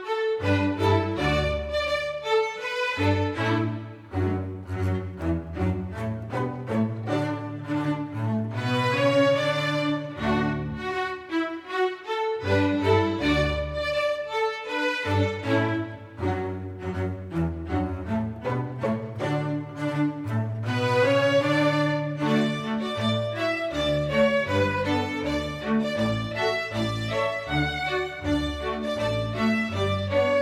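No technical faults can be heard anywhere in the recording.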